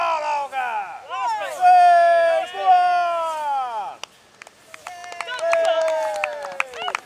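No technical faults can be heard anywhere in the clip. Nothing in the audio points to a problem in how it was recorded, processed or delivered.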